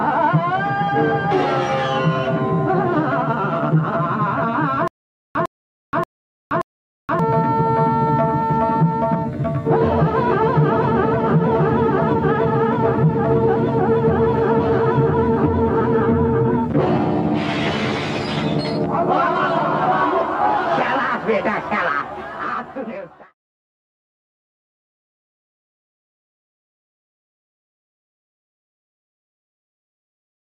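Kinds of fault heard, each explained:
Stutter with silent gaps: From 4.88 to 7.19 s the same short burst of sound, about 105 ms long, plays four times. Each burst is followed by roughly 475 ms of dead digital silence. The bursts come back at a steady pace of one every 579 ms. This points to a stream or player that stalled and likely kept replaying its last fragment on each retry. Whatever audio belonged in that stretch never plays.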